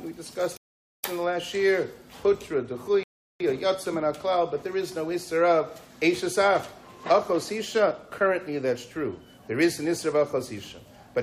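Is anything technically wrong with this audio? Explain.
Yes, there are two rebuffering stalls, at 0.57–1.04 s and 3.03–3.40 s. The player ran dry on downloaded audio and paused until more arrived, so the sound drops to silence, then picks up exactly where it left off, adding roughly 0.47 s and 0.37 s.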